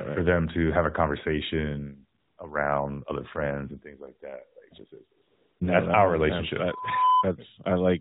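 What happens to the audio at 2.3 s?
AMR comfort noise fills 2.20 to 2.38 s, between "to have a conversation" and "around other friends and". The phone judged this 180 ms gap silent and sent no speech frames. The receiver then swapped the real background for smooth synthetic noise that switches abruptly in and out.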